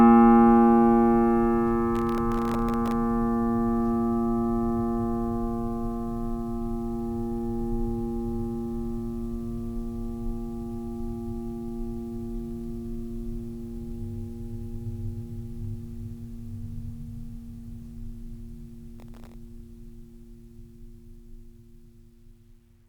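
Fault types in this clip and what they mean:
processor overload crackle: the processor repeatedly misses deadlines for very short buffers, well under a millisecond, and dozens fall silent, tearing the music from 1.95 to 2.92 s and 18.99 to 19.34 s. The waveform shows many tiny flat gaps; the spectrogram shows dense thin vertical broadband streaks.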